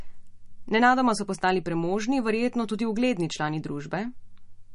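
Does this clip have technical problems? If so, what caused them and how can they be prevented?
Yes. Throughout, the speech sounds watery with nothing above 10.6 kHz, likely MP3 compression starved of bits, which fits roughly 40 kbps; a spectrogram shows a hard ceiling and flickering holes. Encoding at a higher bitrate prevents it.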